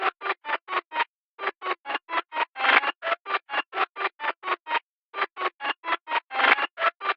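No faults detected anywhere in the recording.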